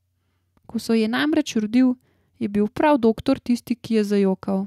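Short speech recording with no audible technical faults anywhere in the clip.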